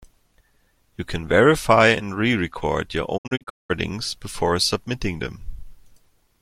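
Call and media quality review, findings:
Digital broadcast dropout, 3.16–3.72 s, ending just before "before submitting". Speech mutes in several holes, 352 ms lost across 512 ms, longest 192 ms, 20 ms fades. Receiver muting on corrupt frames. Spectrogram: blank vertical bands. Waveform: flat gaps, short ramps.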